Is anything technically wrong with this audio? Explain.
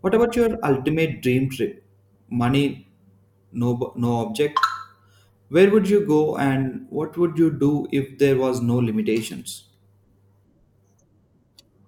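No, the signal has no audible technical faults at any point.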